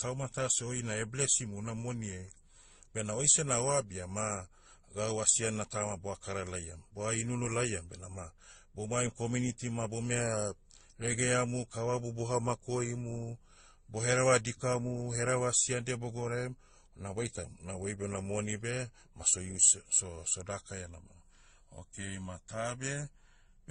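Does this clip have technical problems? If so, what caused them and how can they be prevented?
Yes. The speech has mixed, stacked artefacts throughout and nothing above 9.7 kHz, likely from transcoding between lossy codecs, roughly low-rate MP3, then Opus, then AAC. Keep a lossless master and encode just once.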